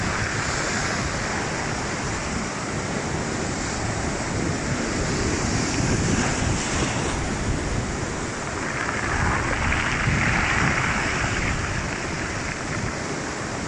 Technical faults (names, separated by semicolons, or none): none